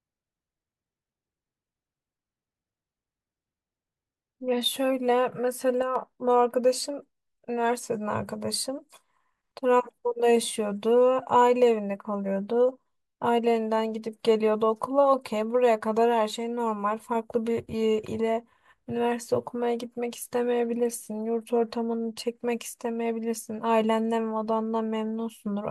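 Speech, with a sudden level dip of about 6 dB from 5.82 to 5.96 s, likely one channel dropping out; the sound halves rather than vanishing as a full dropout would.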